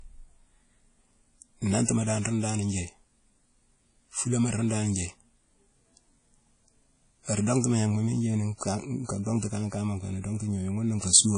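A speech recording carries plainly audible coding damage throughout: a washy, ringing quality with hiss that swells and fades with the voice, and nothing above 10 kHz. That points to WMA compression as the likely cause, at a low bitrate that fits roughly 32 kbps. Long transform blocks spread quantisation noise over time and the encoder discards weak spectral lines. On a spectrogram this shows as a hard ceiling at 10 kHz, with patchy, smeared energy and holes where quieter components were dropped. A pre-echo runs from 1.85 to 1.88 s, just before "dan rune dan". Noise sized for the loud onset leaks across its whole coding block into the quiet moment ahead of it, so a short hiss about 35 ms long comes before the attack, which sounds softened. On the waveform this appears as low, fuzzy activity just before the onset. On the spectrogram it appears as a broadband smear ahead of the sharp edge.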